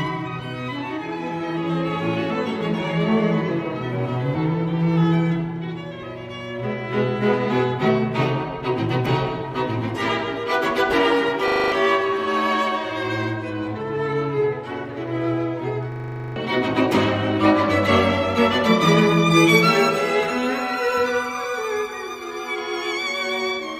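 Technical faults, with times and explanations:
11.48–11.72 s and 15.92–16.36 s, system hang loop: a stalled system replays one 40 ms buffer, producing a 25 Hz buzz and dropping roughly 0.2 and 0.4 s.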